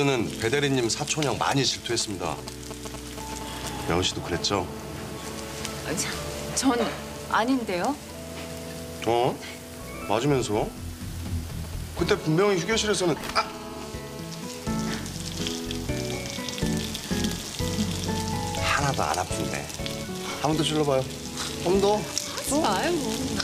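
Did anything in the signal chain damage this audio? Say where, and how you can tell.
Yes. Between 1.91 and 4.29 s there's a galloping dit-dit-dit of short buzzes. Those are GSM signalling bursts, a 2G phone nearby handshaking with the network before its call settles. The damage happens in the analogue wiring. Something in the audio circuit acts as a rectifier, demodulating the radio pulses into audible clicks at the 217 Hz burst rate. They sit fairly loud, roughly 10 dB under the programme.

Right after that, from 4.33 to 7.41 s, and again from 12.06 to 14.45 s, it turns into a steady, raspy GSM phone buzz at 217 Hz with a stack of harmonics. It has nothing to do with the programme, so it won't follow it. That's the phone in an active call, transmitting continuously in bursts that the same analogue stage rectifies. It's about 17 dB down in the first stretch and about 15 dB down in the second.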